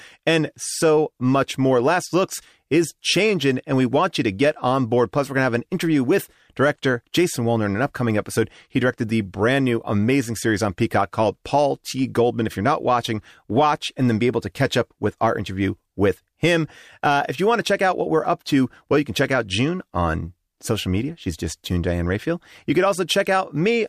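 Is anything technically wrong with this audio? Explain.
No, nothing technically wrong can be heard in this speech recording.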